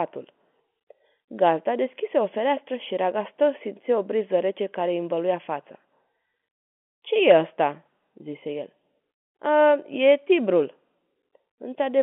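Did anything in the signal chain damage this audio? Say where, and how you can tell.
No, nothing in this speech recording stood out as damage from any stage of the chain when I listened.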